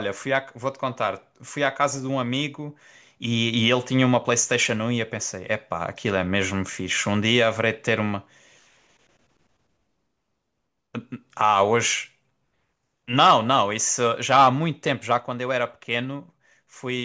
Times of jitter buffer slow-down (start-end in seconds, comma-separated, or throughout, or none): none